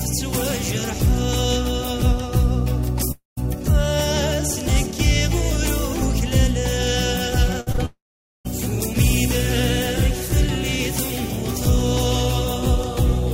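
At 3.11 to 3.39 s the sound stretches into a fading buzz or hiss and then drops to about 150 ms of silence before resuming further on. This is a long network dropout, likely caused by no packets arriving for roughly a quarter of a second, so about 260 ms of the original audio is gone.

From 7.61 to 7.68 s a burst of packet loss removes about 60 ms. The receiver holds the last sound and turns it down across the gap, so it briefly sustains and fades before the audio jumps ahead.

Right after, two short concealed packet losses follow back to back, at 7.72 to 7.76 s and 7.76 to 7.80 s. Each loses about 20 ms, which the decoder patches by extending the preceding sound and blending back in, heard as a quick smear or wobble.

A second long network dropout runs from 7.86 to 8.47 s, likely a stall of over half a second in delivery. The sound again carries on as a decaying buzz or hiss, then roughly 480 ms of silence. 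About 600 ms is missing when audio returns.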